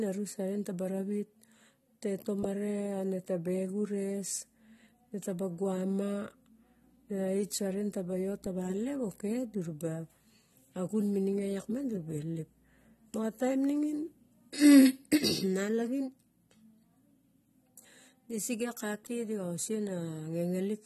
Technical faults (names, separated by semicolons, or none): AAC compression